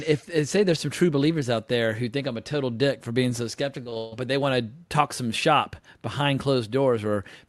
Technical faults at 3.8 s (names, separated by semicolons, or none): repeated packet loss (robotic sound)